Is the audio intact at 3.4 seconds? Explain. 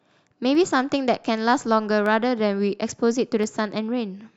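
No. At 3.44 s there is a single sharp click in the speech, most likely dropped samples: a fraction of a millisecond is missing, so the waveform jumps abruptly between values, and the spectrogram shows a thin vertical line across all frequencies.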